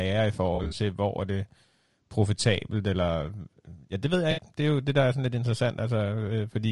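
Low-delay AAC compression runs throughout: the speech sounds rough and grainy, with noise between harmonics and a thin, synthetic top band, likely AAC-ELD's short frames starved at a bitrate near 32 kbps. AAC frame loss with concealment first hits from 0.55 to 0.73 s, just before "hvor er det": about 100 ms of lost frames, in runs of up to roughly 40 ms, are patched from earlier spectrum into a smeared, noisy blur. It recurs from 4.31 to 4.41 s, right after "ja det ved jeg", where 60 ms is concealed as a brief phasey smear.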